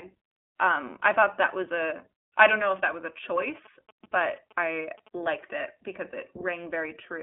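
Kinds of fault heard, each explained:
iLBC codec: The speech sounds narrow and thin, with a slightly rough, buzzy, synthetic edge that is plainly audible. Nothing above about 3.8 kHz survives, and the low end thins out below roughly 250 Hz, giving a telephone-like 250 Hz to 3.5 kHz band. This comes from a narrowband VoIP codec that codes each 20 ms frame's excitation on its own, without drawing on the previous frame. The roughness fits its 15.2 kbps mode.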